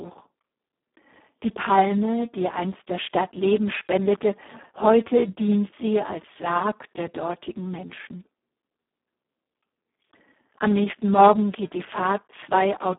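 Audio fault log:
throughout Speex codec: the speech sounds hoarse, buzzy and nearly robotic, which fits Speex at around 4 kbps, where the excitation gets too few bits. A spectrogram shows energy held within 200 Hz to 3.5 kHz, and nothing above 3.8 kHz.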